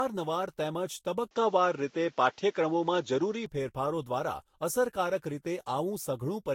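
Right from the start the speech has that swirly, hollow smear, with consonant attacks blurred and nothing above 16.6 kHz. That's more damage than one lossy pass explains, so it's likely generation loss, re-encoded around four times, which fits a Vorbis chain at roughly 60 kbit/s.

Then from 1.31 to 3.46 s the sound abruptly goes duller and boxier, with no gap at the switch, the top end stopping at 7.5 kHz, a level shift of about 5 dB, and a new noise floor about 40 dB down. It clears up again at 3.46 s. That's most likely the input switched to a poorer device for that stretch.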